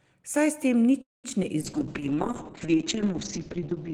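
At 1.01 s, just after "s tem", the speech stops. A call audio freeze follows until 1.26 s. Packets were likely held up in transit, so the jitter buffer ran dry. The receiver stretches the last sound briefly. It then falls silent for about 190 ms. In total 224 ms is inserted. Nothing is lost. The speech resumes where it left off, only later.

Three instances of short concealed packet loss come next. They fall at 1.30 to 1.32 s, 1.32 to 1.34 s, and 1.42 to 1.45 s. Each drops 20 ms of audio before decoding. Almost none of it is filled in. The receiver skips ahead, taking back some of the delay from the freeze. Each one sounds like a small smear or wobble. A brief sound may simply vanish.

A call bitrate drop begins at 1.61 s and runs to the end. The encoder falls from 32 kbps to 6 kbps. It sits at the lowest rate for about 1.5 s. The bandwidth narrows from 20 kHz to 8 kHz. The speech turns muffled and rough. 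Fine high detail is gone. Sibilants lose their crispness.

Within that stretch, a jitter buffer slow-down runs from 1.79 to 2.44 s. The receiver repeats single pitch periods and small pieces of pause. This rebuilds its reserve. It adds 65 ms. Playback runs at 91% speed, with the pitch unchanged. Syllables sound slightly drawn out.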